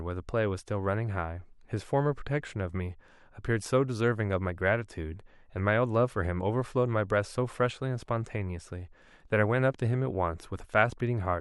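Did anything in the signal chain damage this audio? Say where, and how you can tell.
No, no fault detected.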